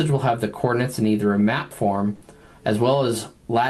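There's a burst of packet loss at about 2.15 to 2.23 s. Around 60 ms of audio never arrived, so the receiver stretched the last bit it had, holding it and letting it fade for roughly 60 ms, and then playback jumps ahead with that stretch gone. It comes through the Opus call path, whose top end stops around 12 kHz, and the coding sounds consistent with a modest bitrate near 32 kbps.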